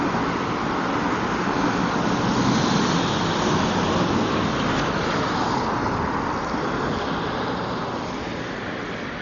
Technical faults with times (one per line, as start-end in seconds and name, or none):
0.00-9.21 Dolby Digital compression